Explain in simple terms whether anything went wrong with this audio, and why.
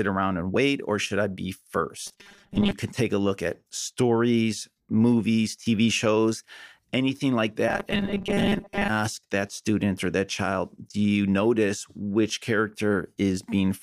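Robotic sound from repeated short buffers appears twice: from 2.07 to 2.72 s, right after "or should I be", and from 7.68 to 8.90 s, after "shows anything like". The speech turns into a stiff metallic buzz at 200 Hz. The likely cause is audio arriving too slowly, so the playback kept repeating a tiny 5 ms scrap in place of about half the real sound.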